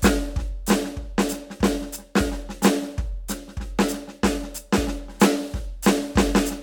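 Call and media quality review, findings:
Findings: no quality faults heard in the music.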